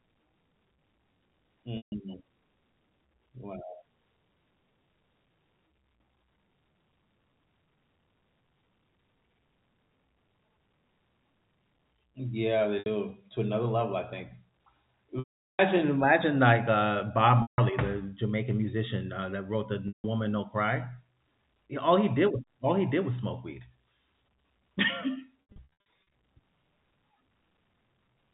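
Packet loss with pitch repetition occurs at 1.77, 12.79 (before "to another level"), 15.19 (400 ms, before "imagine like uh"), 17.42, 19.88 (after "uh that wrote the") and 25.5 s, where short losses scatter. The last pitch period is looped, so short gaps sound like a held buzz, while longer ones fade out into silence.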